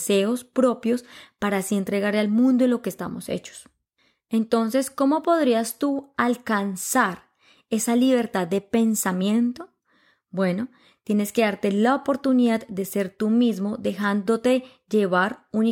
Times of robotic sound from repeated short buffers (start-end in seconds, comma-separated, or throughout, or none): none